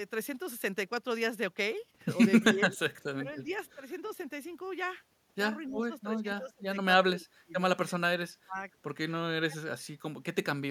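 The voice keeps dipping in patches at 2.42–2.67, 2.91–3.51, 5.68–6.63, 7.07–7.53, 7.89–8.6 and 9.47–9.58 s, from a mild dip early to twenty-odd dB deep later. That's speech suppressed in double talk, likely the echo canceller ducking everything while both sides spoke. Right after the second dip, from 3.51 to 3.75 s, a very faint copy trails about 277 ms behind the voice, far below it in level. That's an echo leak, likely from a speakerphone's canceller letting some of its mic pickup slip back.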